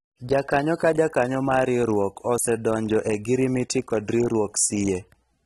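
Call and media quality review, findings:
AAC compression across the whole speech clip, plainly audible. Dull, smeared top end, nothing above 13.9 kHz, fizzy warble on sibilants. Likely an AAC-LC encode at low rate, which fits roughly 27 kbps: bands starved of bits, holes and swirl in the spectrum.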